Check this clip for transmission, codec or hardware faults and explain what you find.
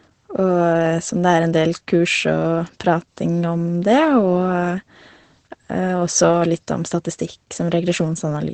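One fault runs through the whole clip: Opus voice compression. Low-rate SILK linear-prediction coding, fitting a bitrate near 12 kbps, leaves nothing above 8.9 kHz and coarse excitation, so the speech sounds muffled, hoarse and faintly robotic.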